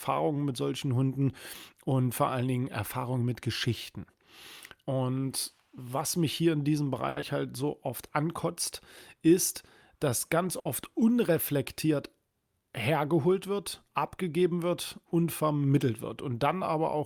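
Right after "mich hier in diesem", around 7.09 to 7.18 s, there's a short stall from a late packet. A packet didn't show up on time, the jitter buffer ran dry, and the receiver stretched the last bit of sound for about 70 ms until the packet arrived. Nothing is actually lost, and playback picks up exactly where it stopped, but that sound hangs on a touch too long and everything after it runs about 70 ms later than before.

Straight after that, from 7.20 to 7.24 s and still just past "mich hier in diesem", comes a short concealed packet loss. This time the audio really didn't make it to the decoder in time. About 40 ms is gone, and the receiver papered over it with roughly 20 ms of continued sound before blending back into the real signal. You get a quick smear or wobble there, and the timing pulls back in by a small amount, since less was filled than was dropped.

Later, at 10.59 to 10.67 s, just after "ankotzt ist dass ganz", there's a burst of packet loss. 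A run of audio arrived too late or not at all. The receiver carried the last sound on for about 60 ms, fading it down as the gap went on, then skipped ahead. About 60 ms of real audio is simply missing, so it comes across as a brief held, dimming buzz or hiss followed by a jump forward.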